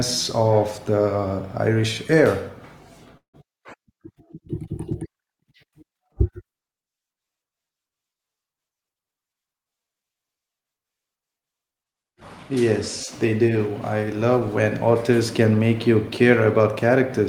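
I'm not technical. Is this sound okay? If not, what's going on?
No. At 3.17 to 3.35 s there is a call audio freeze, likely from delayed packets: the sound stalls, fades to silence, then resumes where it stopped. From 9.10 to 10.25 s, a jitter buffer speed-up plays the speech about 14% faster at the same pitch, trimming roughly 150 ms so it sounds hurried.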